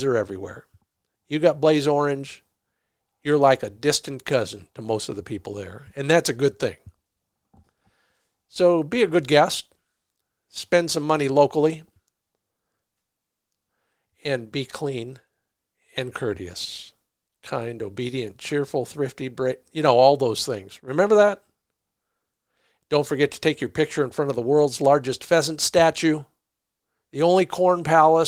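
No technical faults can be heard anywhere in the recording.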